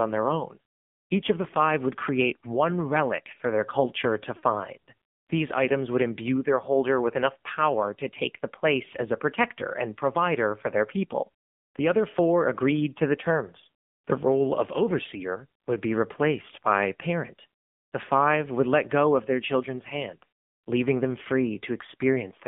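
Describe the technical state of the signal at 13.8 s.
At 13.8 s the speech has passed through the AMR narrowband mobile codec, as it has for the whole clip. AMR-NB samples at 8 kHz and rebuilds speech from a vocal tract model driven by a pitch predictor and a handful of pulses per 5 ms block; at 7.4 kbps that reconstruction is coarse. The sound is confined to roughly 150 Hz to 3.5 kHz, and the codec's buzzy, synthetic colouring is plainly audible.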